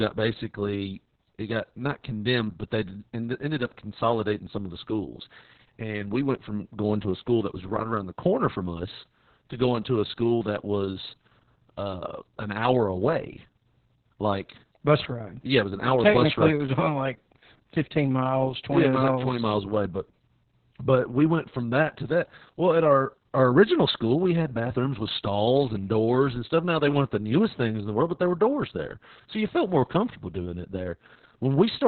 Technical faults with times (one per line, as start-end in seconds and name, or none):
0.00-31.87 Opus voice compression